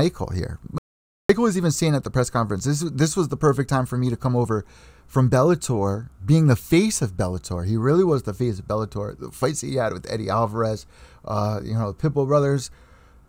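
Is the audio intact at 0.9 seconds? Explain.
No. An audio dropout to silence runs from 0.78 to 1.29 s, likely from a lost input link: silence replaces the speech, leaving 0.51 s of dead silence before "was even saying at".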